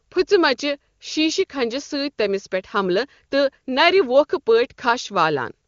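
Speech over an AMR wideband (HD Voice) link at 23.85 kbit/s, the codec's highest rate, with no technical fault to report.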